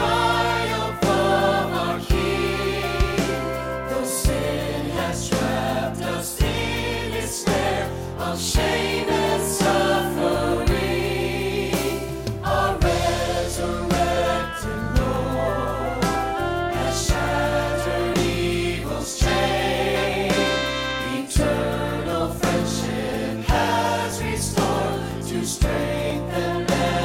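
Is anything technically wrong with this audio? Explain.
Yes. From 14.17 s to 26.1 s there are periodic USB or driver dropouts. Something in the playback or capture chain stalls about once every 1.0 s. Each time, a few milliseconds of audio are skipped outright rather than replaced by silence. The waveform jumps across the gap. This causes regular ticks, roughly fifteen in all. They come at a steady, clock-like pace and are heard only where sound is present.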